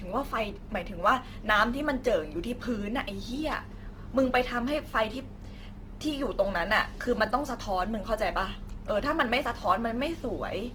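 From start to finish, the converter's sample clock wanders by a few microseconds, so each sample is taken slightly early or late. On steep, bright parts of the speech this becomes a faint hiss and roughness roughly 35 dB below the signal, vanishing in pauses.

Throughout, the audio also carries Opus compression, likely in its music (CELT) mode at a low rate near 16 kbps. The encoder fills starved bands with folded or noise-like content, so the speech sounds plainly grainy and rough, though content still reaches about 20 kHz.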